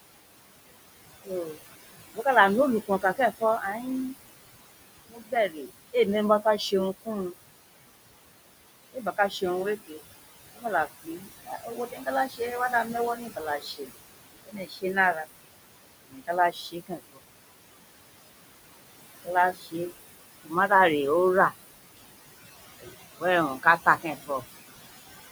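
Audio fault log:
throughout: noise suppressor artifacts. The suppressor pulls down every band it judges to be steady noise, by about 19 dB, frame by frame, so the room noise, sitting about 12 dB below the speech, sinks between phrases and swells back under them.
1.24 to 3.85 s, 5.08 to 7.08 s, 8.93 to 17.2 s, 19.25 to 24.45 s: speech cut by the noise suppressor. Parts of the speech were mistaken for noise and turned down along with the background, by about 19 to 21 dB at the deepest. Soft consonants and word endings come out swallowed or faint. The longest stretch, 8.93 to 17.2 s, loses roughly three seconds in all, while the other spans lose well under a second each.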